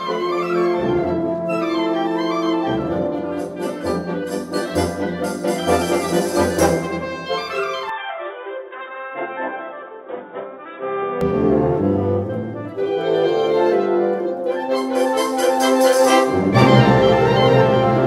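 At 7.89 s the sound suddenly goes dull and boxy, with nothing above 3.8 kHz, drops by around 5 dB, and picks up a faint new background noise well below it. That's likely the input switched to a poorer device, and it switches back cleanly at 11.21 s with no gap.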